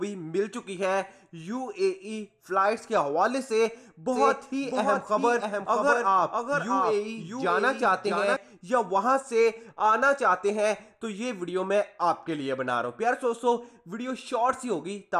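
From 4.12 to 8.36 s a full-band copy trails about 0.7 s behind at roughly 5 dB lower, a doubled audio track, likely from a second, slower capture path.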